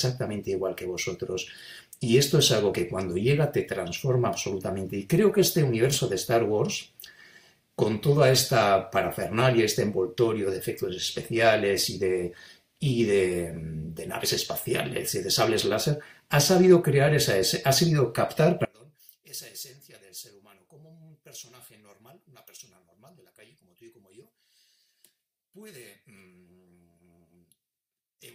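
From 18.65 s to the end, the speech drops by about 25 dB to a faint trace, likely one channel inverted, cancelling shared centre sound in mono.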